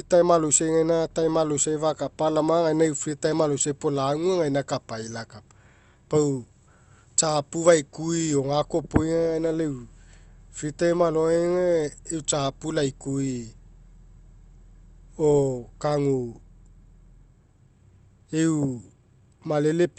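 No faults can be heard in this speech; the top end stops at about 8 kHz, which fits an Opus call link at that bandwidth setting and is expected behaviour of the path, not a defect.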